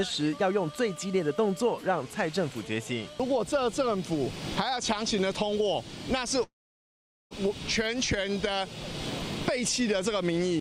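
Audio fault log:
6.43–7.34 s, long network dropout: audio likely stopped arriving for 0.88 s; the last sound trails into a brief fading buzz, then 0.81 s of silence before audio resumes.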